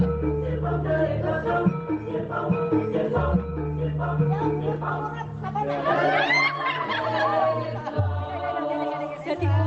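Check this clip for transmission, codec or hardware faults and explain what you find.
Nothing stood out on listening; the audio comes through the call path as expected, with its top end stopping around 8 kHz.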